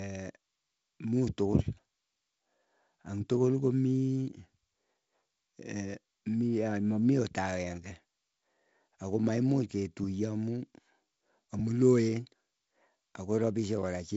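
No technical faults are heard in this speech, which comes over a G.722 wideband telephone link with nothing above about 7.7 kHz.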